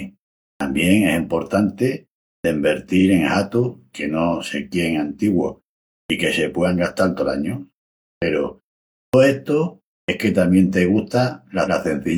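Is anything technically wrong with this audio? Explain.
Yes. The speech has two faults.

Clipped start after a pause occurs six times: at 0.55, 2.39, 6.04 (just before "que se"), 8.17, 9.08 and 10.03 s. Each follows a silence of 0.3 to 0.56 s. The output device sleeps during the gap and needs time to wake. Meanwhile about 47 to 55 ms of the next sound is lost. Each phrase starts abruptly, without its first sounds.

Repeated frames occur twice. At 2.97 s a 43 ms stretch plays twice, which fits a single compressed frame. At 11.63 s a 128 ms stretch plays twice, which points to three frames. The same data was decoded again. Each event is a brief stutter. It lengthens the audio by the repeated time, about 43 ms and 128 ms.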